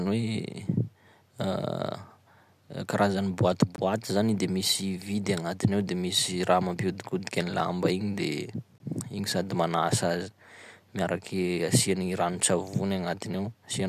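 At 3.76 s and 8.78 s, a gap between chunks inserts 20 ms of silence at 5-second joins: hard-edged holes, seen as flat waveform breaks and blank vertical spectrogram stripes.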